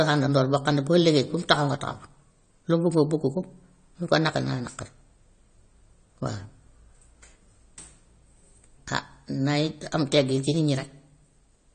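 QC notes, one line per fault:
Throughout, AAC compression: the speech is dull and smeared, with nothing above 9 kHz and a fizzy, warbling texture on sibilants and held sounds. The cause is likely an AAC-LC encoder starved of bits, consistent with around 32 kbps, lowering its cut-off and quantising coarsely.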